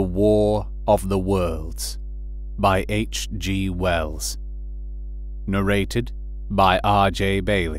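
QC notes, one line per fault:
Throughout, mains hum: a ground loop or a transformer close to the recording chain is coupling the 50 Hz power line into the signal path, so a steady low tone at 50 Hz, with a few low harmonics above it, sits under the speech for the entire clip. It runs at roughly 10 dB below the speech, loud enough to be plainly heard and to thicken the bottom end.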